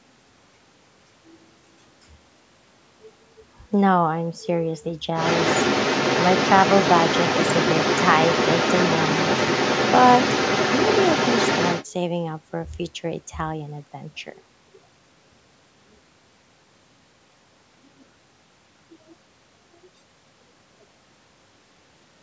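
The echo canceller most likely failed to fully remove the far end's loudspeaker playback from the microphone, so the other side's voice leaks through from 5.2 to 11.9 s. It sits only a few decibels below the main speech, as a second talker overlapping the call's 8 kHz band-limited sound.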